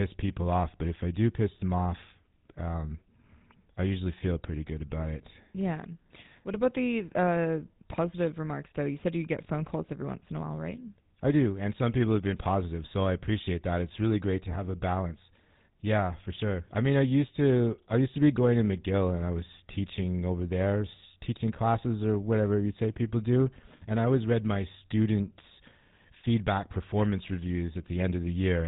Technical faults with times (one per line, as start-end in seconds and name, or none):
0.00-28.67 GSM full-rate codec